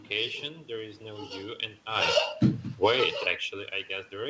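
Automatic gain falling from 1.87 to 3.24 s: the gain control judged the input too loud and pulled its gain down about 14 dB, so speech and room noise sink together.

Automatic gain rising from 3.14 to 3.78 s: after the input dropped about 22 dB, the control raised gain about 12 dB, swelling speech and background together.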